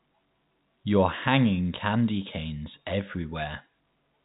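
No faults heard: the speech passes through G.711 telephone coding, with the band stopping near 3.8 kHz as that path does.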